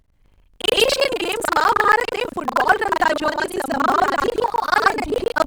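Buffer tearing runs throughout the speech, heard as a steady robotic buzz at 25 Hz that appears only while sound is present. The writing side and the reading side of the playback ring buffer have drifted out of step, so they cross within every 40 ms period. Roughly two thirds or more of each period replays audio from about a tenth of a second earlier. Hard joins on both sides of that stale stretch produce the rattle.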